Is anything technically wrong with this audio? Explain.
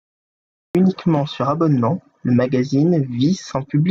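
Yes. The clip has a cut-off start: the first 0.75 s is digital silence, and the speech then begins abruptly at 0.75 s, already mid-sound. Capture or streaming began late, so the onset of that first sound was never recorded and there is no natural attack or fade-in. On a waveform this appears as a dead-flat line that jumps straight to full amplitude; a spectrogram shows blank space ending in a hard vertical edge.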